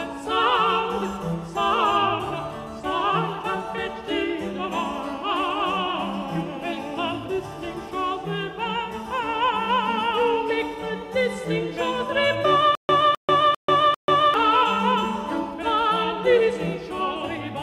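From 12.75 to 14.34 s the audio breaks into a stutter with silent gaps: a 258 ms fragment repeats four times, each followed by about 139 ms of digital silence, every 397 ms. The likely cause is a stalled stream replaying its last buffer. On a waveform, identical blocks alternate with flat silent stretches.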